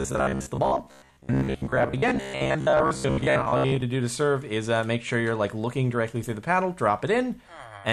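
Robotic sound from repeated short buffers runs from 0.02 s to 3.82 s: the audio turns into a rigid, metallic buzz at 66.7 Hz that only loosely follows the underlying sound. The likely cause is new audio arriving too seldom, so the playback keeps re-sending its last fragment, about 15 ms long, which matches that buzz rate. Around 70 percent of the stretch is filled with these repeats, and the real audio in those gaps is skipped.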